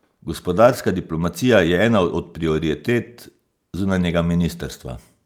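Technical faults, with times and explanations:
No technical faults can be heard in this recording.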